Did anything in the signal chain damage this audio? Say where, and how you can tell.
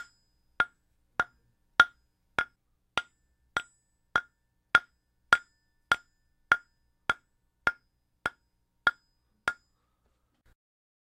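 Yes. At the driver or buffer stage, the capture side likely fell behind and lost whole blocks of samples before reading them, a dropped buffer (overrun). The audio jumps forward abruptly three times, at 3.98, 6.77 and 8.90 s, each time skipping roughly 10 ms. There is no silent gap: the sound before and after each point is butted together, so the waveform breaks continuity and the audio lurches ahead instead of pausing.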